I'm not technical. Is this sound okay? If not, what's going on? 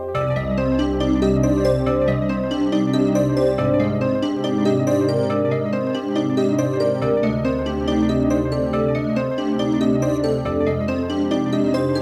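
Yes, nothing wrong can be heard anywhere in this clip, so there is nothing to fix.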